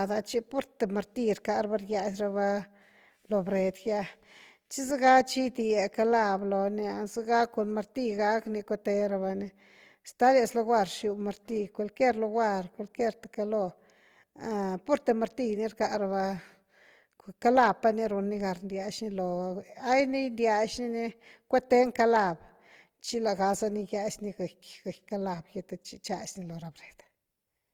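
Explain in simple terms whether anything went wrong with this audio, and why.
Yes, something went wrong. From start to finish the speech sounds rough and grainy, with a fizzy, noisy texture clinging to every sound instead of a clean, smooth tone. The likely cause is Opus compression, a format that shrinks audio files. Here it was squeezed hard, so when it ran short of detail it filled the gaps with noise-like stand-ins. That keeps the sound full and bright, reaching right up to the top of hearing, but leaves this grainy roughness.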